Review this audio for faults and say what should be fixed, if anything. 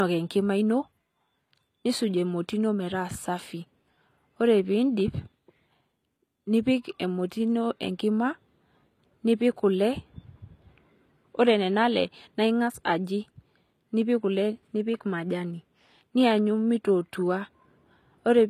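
Throughout the speech, the band stops dead at 14.9 kHz and coding smear persists, the signature of low-bitrate audio saved at a high bitrate, likely a roughly 24 kbit/s HE-AAC source re-encoded to MP3. Unlike ordinary low-bitrate encoding, the container's generous bitrate adds nothing back. Prevent it by re-encoding from the original uncompressed master instead of a compressed copy.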